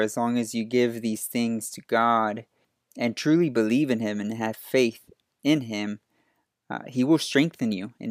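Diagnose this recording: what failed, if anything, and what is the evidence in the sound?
Nothing stood out on listening to the speech in this recording.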